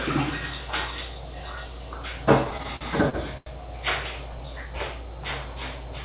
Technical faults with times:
2.44-3.48 repeated stalls (stutter)

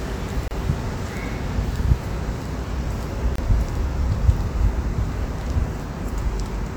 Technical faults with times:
0.48-0.51 gap at a join of encoded pieces
3.36-3.38 gap at a join of encoded pieces

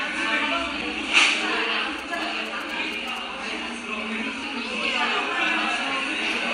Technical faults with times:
0.80-0.82 damaged data in a compressed stream
1.99-3.18 GSM signalling bursts
4.43 damaged data in a compressed stream

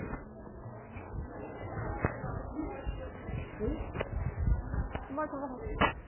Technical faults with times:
0.00-6.07 MP3 compression

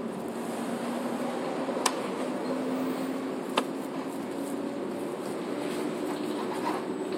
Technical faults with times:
4.23 overlap between stream segments

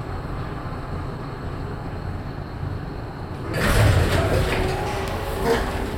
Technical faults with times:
1.41 compressed frames skipped

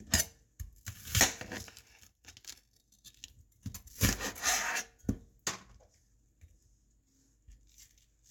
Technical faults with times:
none

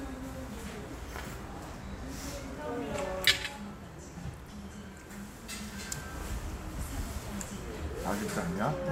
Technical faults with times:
1.74 dropped buffer (overrun)
4.51 dropped buffer (overrun)

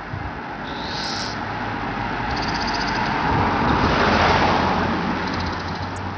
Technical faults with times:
0.00-6.17 Bluetooth SBC compression

